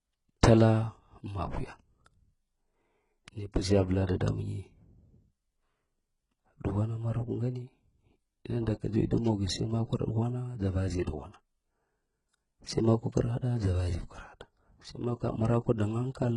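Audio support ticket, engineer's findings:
Gritty, metallic treble throughout; s sounds lispy. Heavy codec damage, nothing above 11.1 kHz. Likely HE-AAC compression, which fits a rate near 12 kbps. Treble rebuilt by band replication from lower bands, so harmonics misalign at the crossover.

Loud pop at 0.61–0.63 s and again at 4.28–4.30 s, one each, roughly 15 dB above the signal. Speech continues underneath. Likely an electrical step or pulse from a plug, switch, static or driver glitch.

Pre-echo at 4.07–4.09 s (23 ms spread) and 11.04–11.07 s (32 ms spread). Short hiss before attacks, onsets smeared. Transform codec spreading block quantisation noise into the quiet lead-in before a late attack.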